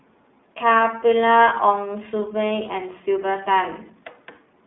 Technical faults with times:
0.00-4.66 iLBC codec

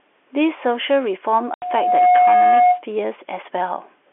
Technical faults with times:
1.30-2.84 loudspeaker feedback squeal
1.54-1.62 packet loss filled with silence

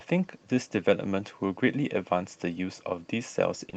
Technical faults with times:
0.00-3.76 clock drift between sender and receiver
0.44-2.96 repeated timing corrections
3.70-3.75 short stall from a late packet

